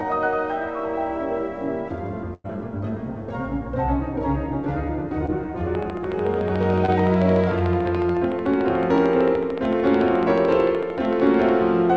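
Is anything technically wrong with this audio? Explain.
Yes, there are three kinds of fault layered over a call that's band-limited to nothing above 8 kHz, which fits a wideband codec like G.722 at 64 kbps.

From 2.34 to 2.46 s there's a burst of packet loss. About 100 ms of audio never arrived. The receiver stretched the last bit of sound to cover roughly 100 ms, fading it down, and about 30 ms of that ends in outright silence. You hear a held buzz or hiss that dies away, then the audio picks up further along with a chunk missing.

Three short concealed packet losses land at 5.26, 6.86 and 8.12 s, each about 20 ms. In each case the decoder didn't get a packet in time. It patched the hole by extrapolating from the preceding sound and then crossfaded back into the real signal. Each is heard as a brief smear or wobble, and anything very short at those moments can get swallowed.

From 5.75 s to 11.50 s there's a train of clicks, roughly seventy in all. 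They come at a steady 13.6 per second and peak around ten decibels above the surrounding audio. They're near-identical pops ticking away over everything, gaps included. The likely cause is interference from nearby equipment or a faulty connection or power supply, injecting the same pulse over and over.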